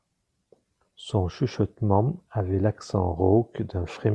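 No technical faults can be heard in the speech, so there are none to describe in time order.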